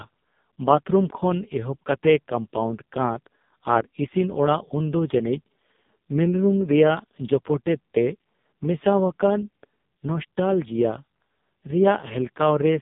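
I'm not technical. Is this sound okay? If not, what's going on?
No. Throughout the recording the speech sounds thin, buzzy and very robotic, like a poor mobile phone call, with nothing above about 3.6 kHz. This is the AMR narrowband mobile codec, squeezed very hard, rebuilding the voice from a rough model.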